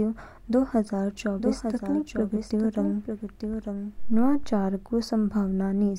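Just after "दो हजार", at 1.38 s, a second copy of the speech abruptly joins the first, trailing about a second behind and somewhat quieter, and it cuts off just as suddenly at 4.46 s. The echo has full bandwidth and no decay or room colour, so it sounds like an overlaid duplicate rather than a reflection. This is a doubled audio track, likely from the signal being captured again through a slower path or an edit leaving two offset copies.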